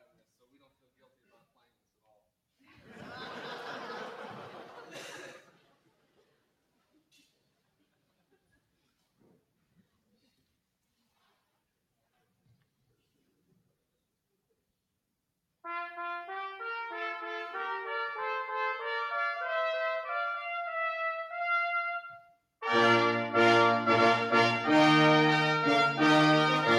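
From 5.42 to 5.88 s, the noise suppressor cuts sound it mistook for noise. The level sinks by about 11 dB at its deepest.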